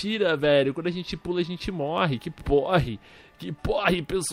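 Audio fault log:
No audible faults detected.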